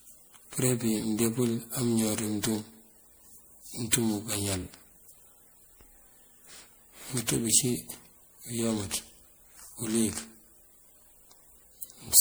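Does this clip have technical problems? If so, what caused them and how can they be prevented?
Yes. The speech sounds swirly, smeared and hollow throughout, and its attacks are blurred. This is likely generation loss from roughly seven rounds of MP3 encoding, consistent with 96 kbit/s. Every round requantises on a shifted frame grid, so noise and spectral gaps pile up. Prevent it by editing from a lossless master and encoding only once.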